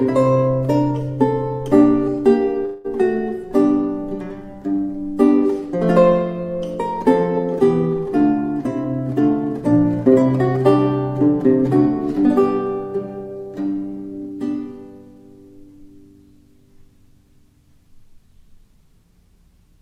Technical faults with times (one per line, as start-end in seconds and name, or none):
2.65-2.86 call audio freeze
8.60-10.65 jitter buffer speed-up